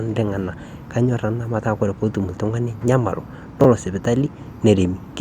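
At 3.61 to 3.65 s the speech has chunks out of order. A 10 ms chunk was delivered or written three chunks late, so it plays after the three chunks that should have followed it. No audio is missing, but the sequence across those 40 ms is scrambled, leaving three abrupt joins where the waveform does not line up. The result is a brief jumbled smear in the speech.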